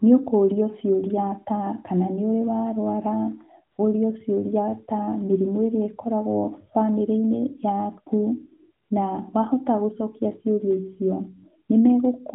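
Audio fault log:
3.72–3.78 s and 8.84–8.90 s: AMR comfort noise. Speech frames stop for 60 ms each time. Smooth synthetic noise briefly replaces the real background.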